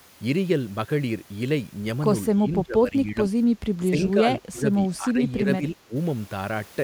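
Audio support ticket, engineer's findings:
Speech suppressed in double talk at 2.35–3.18 s, 3.9–4.27 s, 4.49–4.67 s and 4.97–5.94 s. Dips of about 5 to 25 dB. On the waveform, the envelope is notched. Likely echo canceller attenuating near-end speech during far-end talk.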